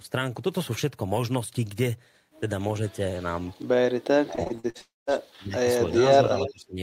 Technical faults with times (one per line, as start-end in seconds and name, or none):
4.17-6.81 speech suppressed in double talk
4.35-4.77 repeated packet loss (robotic sound)
4.81-5.09 long network dropout
6.35-6.51 echo leak